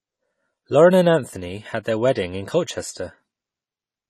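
From start to finish the speech is dull and smeared, with nothing above 14 kHz and a fizzy, warbling edge on sibilants and held vowels. The damage is plainly audible and points to AAC compression, likely AAC-LC at a low rate that fits a bitrate around 32 kbps. At that rate the encoder has too few bits for each frame, so it drops the top band, leaves gaps in the spectrum and quantises what remains coarsely.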